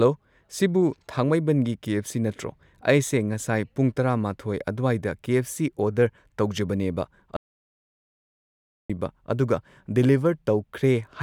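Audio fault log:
7.37–8.90 s, audio dropout to silence: the speech breaks off mid-flow, and 1.53 s of signal is replaced by silence before the speech returns just as abruptly. Unlike a noise gate or a natural pause, the gap keeps no room tone or hiss; the floor drops to silence and anything spoken in that span is lost. The likely cause is the input being cut off by a disconnected device, failed link or stray mute while writing continued.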